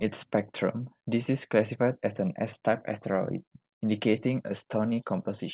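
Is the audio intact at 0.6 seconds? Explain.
Yes, the audio is intact at 0.6 seconds, with nothing there beyond the narrowband sound of the call path, which carries nothing above 4 kHz.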